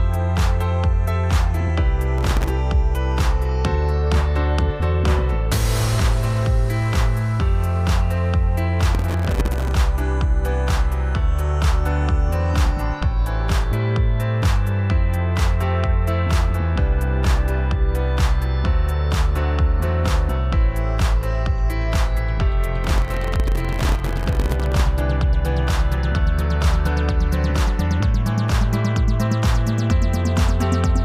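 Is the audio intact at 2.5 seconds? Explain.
No. 2.5 seconds is the tail of a processor overload crackle running from 2.18 to 2.50 s. Around thirty buffer deadlines, fitting buffers of roughly 1.5 ms, are missed, each leaving a hard-edged silent gap, heard together as gritty tearing that stops right there.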